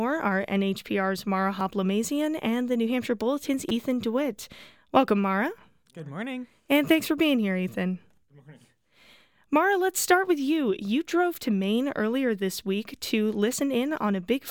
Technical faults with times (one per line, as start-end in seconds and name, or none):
1.59 repeated buffer
3.69 repeated buffer